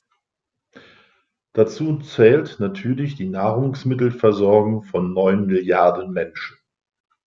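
Nothing goes wrong anywhere in this speech recording: there's no technical fault to point to at any moment.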